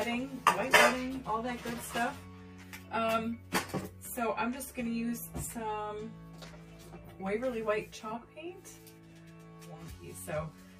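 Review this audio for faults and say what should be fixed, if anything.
Channel delay (comb filtering) runs through the whole clip. One channel arrives roughly 10 ms late, so the mono sum cancels at evenly spaced frequencies, starting around 40 Hz, giving a hollow, phasey tone. Unlike flanging, these notches stay fixed rather than sweeping. Keep the channels time-aligned before any mono fold-down, checking buffer and plugin latency compensation.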